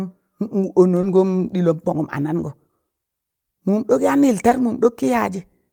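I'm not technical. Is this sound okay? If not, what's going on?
No. At about 1.01 to 1.05 seconds, and again at about 4.49 to 4.53 seconds, the speech briefly smears or wobbles, as if a tiny piece blurs. This is short concealed packet loss: about 20 milliseconds of the call arrived too late to be played, so the receiving end guessed the gap by stretching the sound just before it, then blended back into the real speech over the next instant.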